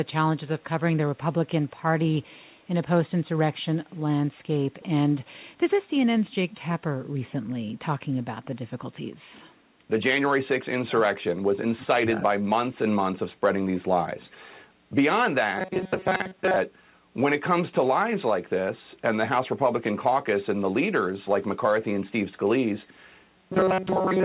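Right at 4.72 s there's a short echo leak running to 4.85 s, then two quick blips at 6.52 s and 8.43 s. Each is a faint copy of the speech trailing the original by 320 ms, most likely the far end's loudspeaker feeding its mic with the echo canceller not catching it all. The copies sit at about 30 dB, 20 dB and 35 dB below the speech.

Next, between 10.86 and 11.0 s and again from 11.61 to 12.18 s, the speech gets ducked, likely speech suppressed in double talk: both ends were talking, and the canceller couldn't tell this talker from the returning echo, so it pushed everything down. The first dip goes about 15 dB deep. The longer second one reaches about 20 dB and affects a good part of that stretch.

Last, from 15.58 to 16.56 s and from 23.37 s right through to the end of the clip at 24.24 s, the sound turns robotic from repeated short buffers. Audio likely arrived too late, and the receiver kept looping its last snippet, with most of each stretch made of repeats. 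That stamps a fixed 188 Hz metallic buzz onto the sound, which fits a buffer of a bit over 5 ms. The buzz loosely tracks the speech, all of it heard through G.711's narrow band with nothing above 4 kHz.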